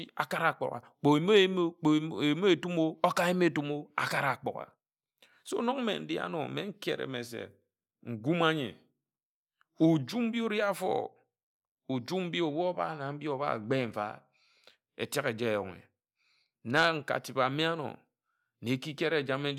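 No technical faults can be heard anywhere in it.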